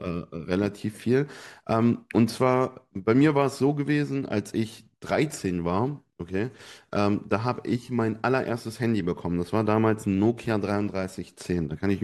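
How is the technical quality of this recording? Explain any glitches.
No technical glitches can be heard anywhere in the recording.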